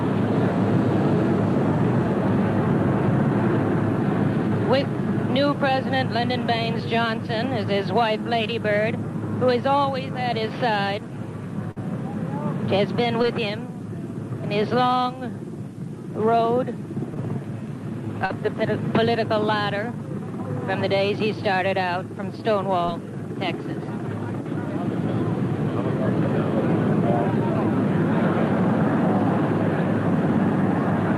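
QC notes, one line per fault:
11.71–11.78 s, burst of packet loss. A run of packets was lost or arrived too late to play, leaving a hole of about 47 ms. The receiver stretched the last sound across roughly 47 ms and faded it down. So the audio holds briefly, then sags. When it resumes, about 40 ms of the real material is gone. That is why the next sound jumps in slightly ahead of where it should.
13.22–13.25 s, 17.14–17.17 s, 18.25–18.32 s and 22.86–22.89 s, short concealed packet loss. Each time, a small piece never reached the decoder in time. The receiver extended the preceding sound for 12 to 42 ms, then blended back into real audio. Each event is a brief smear or wobble. Between 20 and 40 ms of the original is missing each time. The one at 18.25 s is the longest. All of it sits on a call path whose top end stops near 12 kHz.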